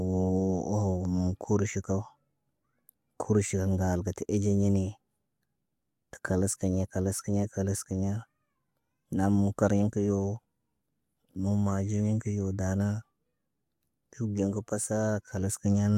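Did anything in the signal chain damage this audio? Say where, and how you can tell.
Yes, at the driver or buffer stage. From about 3.35 s to the end there's a steady buzz near 46.9 Hz, which fits 1024-sample blocks. That's a block size mismatch (truncated): each block's tail gets dropped, chopping the sound at the block rate without any audible speed-up.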